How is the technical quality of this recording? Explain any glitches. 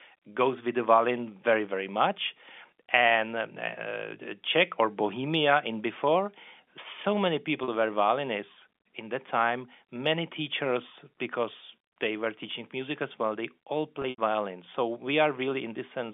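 The recording has two audible glitches, both from packet loss with pitch repetition. It is carried over G.711 telephone coding, which limits it to roughly 250 Hz to 3.5 kHz.

At 7.64 s, 40 ms drops out, which points to two lost packets. The receiver repeats the last pitch period, giving a brief buzzy hold. At 14.02 to 14.18 s, 100 ms is lost in bursts up to 80 ms long. The repetition fades toward silence, then speech cross-fades back.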